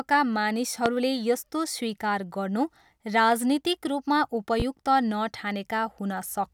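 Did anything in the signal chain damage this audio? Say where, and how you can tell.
Yes, two loud pops sit on top of the speech, a sharp one at 0.86–0.89 s, around 20 dB above the signal, and a softer one at 4.60–4.63 s, roughly 10 dB up. The speech carries straight through both, which points to a likely voltage spike in the analogue wiring.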